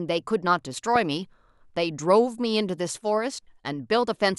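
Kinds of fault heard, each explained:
Loud pop: a single sharp pop lands at about 0.96 s and is gone by about 0.98 s, standing roughly ten decibels above the speech, which carries on underneath without a break. It is likely an electrical pulse, such as a plug, switch or static discharge, pushed into the signal and shaped by the circuits after it. Unlike a dropout or a digital click from a splice, nothing is missing from the speech; the pop sits on top of it, a brief added thump rather than a gap or discontinuity.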